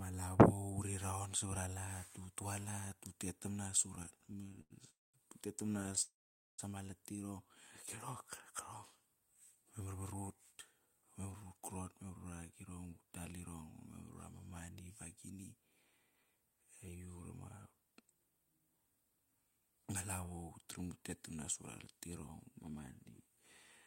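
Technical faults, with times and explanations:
3.95–4.72 s and 5.64–6.02 s, repeated stalls (stutter): the speech catches and drags in short hiccups, with 20 brief gaps in the first span (the longest 91 ms) and 12 in the second (none over 11 ms). The receiver kept stretching the last sound to fill about 288 ms and 118 ms, roughly a third of each span. Packets were arriving late, so the jitter buffer kept running dry. Nothing is lost, but the flow breaks up.
4.90–5.16 s and 6.02–6.60 s, call audio freeze: the audio stalls, first for 232 ms (about 210 ms of it silent) and then for 569 ms (470 ms silent), before carrying on from exactly where it halted. Nothing is skipped. The likely cause is packets held up in transit until the jitter buffer emptied. The receiver briefly continued the last sound, let it fade, and then waited. Each wait adds its full length of delay.
9.20–13.02 s, 17.70–18.60 s and 22.20–23.44 s, jitter buffer speed-up: the speech sounds hurried but keeps its normal pitch, running at 109%, 112% and 108% speed. 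The jitter buffer had built up more audio than it aims to hold, so the receiver trimmed many tiny pitch-period slices to bring the delay down. It cut roughly 0.3 s in total from the first stretch and about 0.1 s from each of the others.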